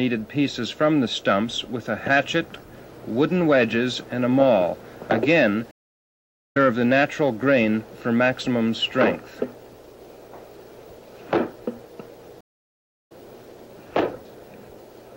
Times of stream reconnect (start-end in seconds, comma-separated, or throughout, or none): 5.71-6.57, 12.41-13.12